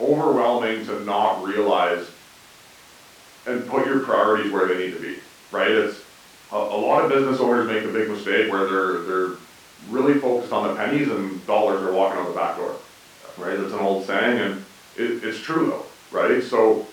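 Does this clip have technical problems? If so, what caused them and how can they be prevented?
No, the speech recording has no technical faults, so there is nothing here to trace back or prevent.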